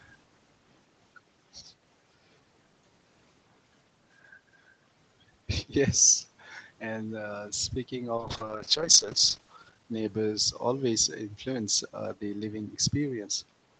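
From 8.17 s to 11.41 s the speech turns rough and watery, thinning further for about 1.4 s at its worst before clearing. This is a call bitrate drop: the bandwidth estimate fell and Opus was starved of bits, which fits a fall from roughly 32 kbps to 12 kbps, so it coded the sound far more coarsely until the rate recovered.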